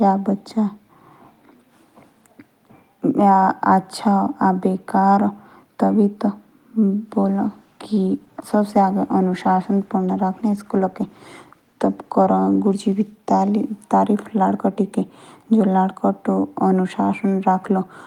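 From 7.23 to 13.73 s a call bitrate drop coarsens the speech, consistent with the encoder falling from 32 to about 17 kbps for roughly 5.4 s. It sounds rough and muffled; a spectrogram shows the upper frequencies cut away and the remaining detail smeared.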